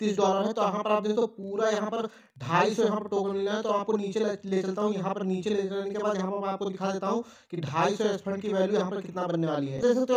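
From start to finish, channel delay (doubling) gives every onset a second copy 42.7 ms later at the same level, which fits a 2048-sample buffer holding back one channel before a mono sum. Unlike reverb, there is one equal-level repeat and no decaying tail.

From 1.43 to 3.49 s, Wi-Fi interference adds a faint, steady ticking well below the sound, about ten times a second. A nearby radio's beacon, repeating every 102.4 ms, is being rectified by the circuit. Its regular clicks set it apart from continuous mains hum or buzz.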